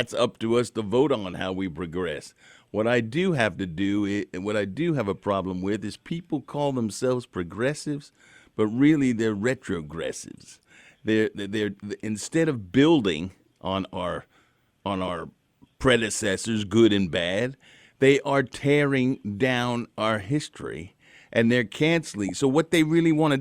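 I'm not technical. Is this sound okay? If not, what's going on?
No. There is a corrupt frame decoded at 5.93 to 5.98 s, right after "have a problem with", and another at 9.84 s, after "progressives but really they're". The speech was stored in small compressed chunks, and a few bits in some of them got scrambled. The player played those chunks anyway, putting sound at the wrong pitches. You hear a short chirp or blip. The first spans a couple of chunks and is louder. The second is fainter.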